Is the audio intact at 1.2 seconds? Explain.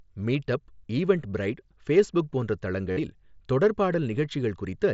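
Yes, the speech at 1.2 seconds comes through intact, carried by the Bluetooth mSBC headset codec without any dropout, glitch or other fault at that moment.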